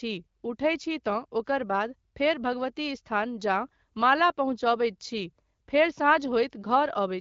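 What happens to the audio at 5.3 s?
Nothing goes wrong at 5.3 s: the speech there comes through intact, carried by the AMR wideband (HD Voice) codec at 12.65 kbit/s with no dropout, glitch or other fault at that moment.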